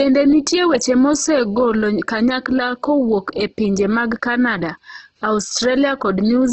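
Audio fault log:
Throughout: Opus compression, likely at a low bitrate near 12 kbps, leaves speech rough and grainy, with bands noise-filled rather than holed, and nothing above 8.2 kHz.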